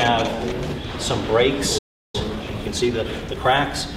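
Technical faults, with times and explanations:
1.78–2.15 s, playback stall: the output cuts to silence mid-flow for roughly 0.36 s, then resumes. The gap points to the player's buffer running dry or its output thread being blocked, likely starving the device of samples until data arrived again.
2.15–3.57 s, time-compressed catch-up: directly after the gap the audio runs hurried, at about 1.25 times normal speed but unchanged pitch. The player is trimming its backlog by dropping short segments and cross-fading the joins.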